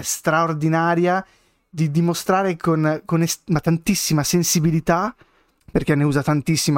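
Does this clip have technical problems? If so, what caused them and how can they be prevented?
No technical faults are audible.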